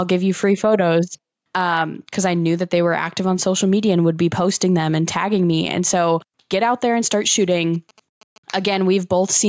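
Throughout the speech there is gain pumping. The gain swings by roughly 5 dB. This is likely a fast limiter pulling down gain that is set too high. Unlike a noise gate, the background never cuts out.

From 7.42 to 8.38 s, just after "out there and start", GSM signalling bursts from a nearby 2G phone come through as a faint, galloping dit-dit-dit of short 217 Hz buzzes, far below the speech. Mains hum would be steady, not stuttering like this.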